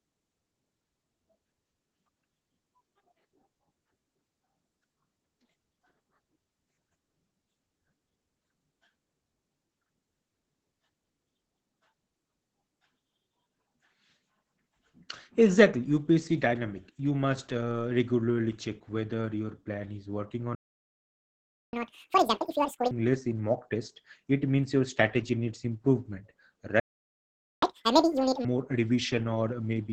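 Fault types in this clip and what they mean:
Opus voice compression: A low-rate speech coder built on linear prediction has squeezed the whole clip, and the heavy damage fits a rate near 10 kbps. The voice is muffled, hoarse and faintly robotic because its excitation is coded coarsely. On a spectrogram the harmonics look smeared and grainy, and nothing shows above roughly 8 kHz. The waveform keeps its overall envelope but loses fine detail.
Playback stall: The sound cuts off mid-flow twice. The first gap runs from 20.55 to 21.73 s, about 1.18 s, and the second from 26.80 to 27.62 s, about 0.82 s. The likely cause is the player running short of data or its thread being blocked, so output fell silent until it recovered. On the waveform each gap is a flat, near-silent line. On the spectrogram each is a blank vertical band with hard edges.
Catch-up at higher speed: Straight after each stall the player races through its backlog at twice normal speed. 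This runs from 21.73 to 22.91 s and again from 27.62 to 28.45 s, before the speech snaps back to its normal rate. Because resampling does the speeding up, pitch rises by roughly ten semitones and the speech sounds chipmunk-like. The waveform looks squashed in time. The spectrogram shows the harmonics shifted upward and spaced wider apart.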